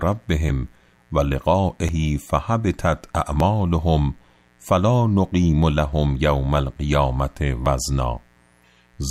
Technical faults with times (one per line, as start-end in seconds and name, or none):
0.00-9.10 mains buzz
0.49 dropped buffer (overrun)
1.89 dropped buffer (overrun)
3.40 dropped buffer (overrun)
5.93 dropped buffer (overrun)
7.66 dropped buffer (overrun)